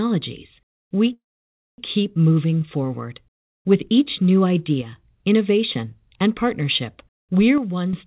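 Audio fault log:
1.13–1.80 s, call audio freeze: the last sound is drawn out briefly and fades, then about 0.58 s of silence follows before the speech picks up exactly where it stopped. This is likely a jitter buffer running dry while packets were held up. Unlike a packet-loss dropout, nothing is skipped: about 650 ms is inserted, and everything after plays that much later. The band-limited sound, with nothing above 4 kHz, fits the G.711 mu-law call path at 64 kbps.
4.82–4.96 s and 7.58–7.93 s, one channel drops out: the first falls between "each new" and "innovation and partnership", and the second follows "innovation and partnership". In each, the level drops abruptly by about 6 dB and then snaps back. The likely cause is one stereo channel going missing before a mono sum, which halves the shared content. This differs from the freeze because the sound runs on without a gap or delay and only gets quieter.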